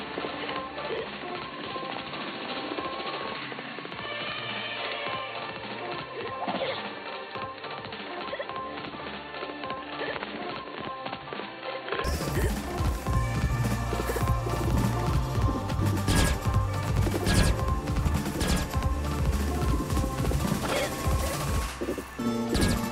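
From the start to 12.04 s the sound is dull, boxy, cut off above 4.4 kHz, noticeably quieter and carries faint background noise of its own, then clears with no gap. The input likely switched to a poorer device.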